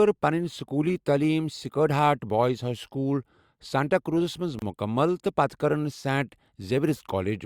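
At 4.59 to 4.62 s there is a gap at a join of encoded pieces. The speech was encoded as separate segments and spliced back together without removing the padding each encoder pass leaves behind: the start-up delay of the next segment and the filled-out final frame of the previous one. The result is a gap of about 29 ms in the middle of continuous speech, its edges smeared so the truly silent part is shorter, after which the speech resumes exactly where it broke off.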